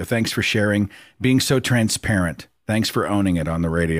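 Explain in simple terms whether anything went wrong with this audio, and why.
Nothing went wrong here.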